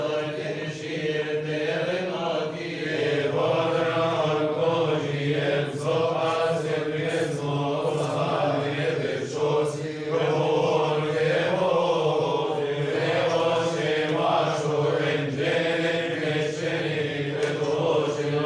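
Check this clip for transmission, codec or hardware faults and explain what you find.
I found no faults to report in the clip.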